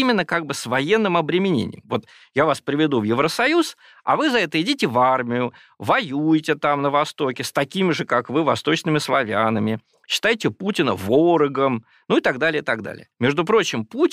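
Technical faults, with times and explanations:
No technical faults can be heard anywhere in the speech. There is nothing to list by time or explain.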